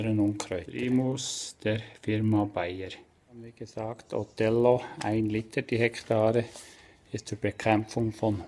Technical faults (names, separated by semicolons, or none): resampler restarted on every block